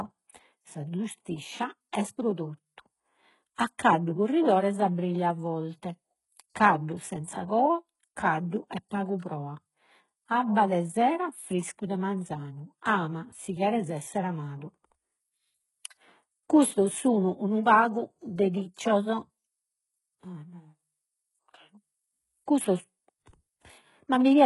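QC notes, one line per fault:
Throughout, HE-AAC compression: heavy damage, nothing above 11.4 kHz, treble likely rebuilt from copied lower bands, so s sounds turn gritty and lispy, consistent with about 12 kbps.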